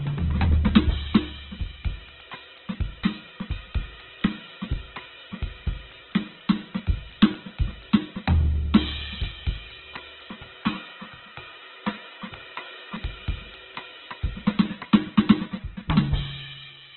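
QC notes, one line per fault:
throughout: Opus compression. The music is grainy, rough and noisy in its tones, with heavy damage across the whole clip and nothing above 4.2 kHz, so it sounds narrow and dull. The likely cause is Opus in its CELT music mode, squeezed to a very low rate that points to around 8 kbps. With so few bits, the encoder fills bands with folded or noise-like content instead of leaving holes, which turns tones coarse rather than swirling.
10.31 to 12.96 s: input switched to a poorer device. The sound abruptly narrows further, with nothing above 3.8 kHz, drops in level by roughly 5 dB, and picks up a new, faint background hiss well below the music. There is no silence at the change, and the original character returns at 12.96 s. This likely comes from the input jumping to a lesser microphone or a headset call profile, whose narrower band, quieter gain and own noise floor take over for that stretch.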